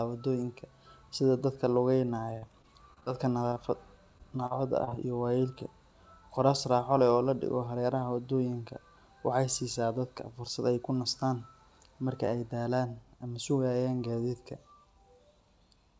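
Repeated packet loss (robotic sound) runs from 2.38 to 3.08 s. Five gaps, the longest 42 ms, are each patched by extending the preceding sound, giving a choppy, robotic stutter.

Short concealed packet loss follows at 3.50 and 3.54 s. Two back-to-back 20 ms holes are filled from the audio just before them, heard as a brief smear.

Repeated packet loss returns from 4.18 to 4.93 s, again with five gaps up to 40 ms and the same clipped, robotic texture.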